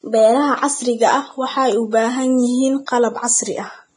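From start to end the speech carries a grainy, hissy texture with nothing above 9.7 kHz, the sign of heavy Vorbis compression. The damage points to a low bitrate, around 22 kbps, which is likely the cause. At that rate the encoder keeps only a smooth spectral outline and rounds the fine treble detail so coarsely that it turns into noise. Sibilants and upper harmonics sound rough rather than merely dull, which separates this from plain low-pass filtering, where the treble would vanish cleanly.

From 2.86 to 2.88 s, just after "waxay u baahan yihiin", a sharp onset is preceded by a brief wash of hiss, a pre-echo spreading about 20 ms ahead of the attack. The codec's quantisation noise, sized for the loud moment, was spread over the whole transform block and so filled the quiet gap before it. Unlike a click or dropout, it is a soft smear that arrives before the attack rather than a break in the sound.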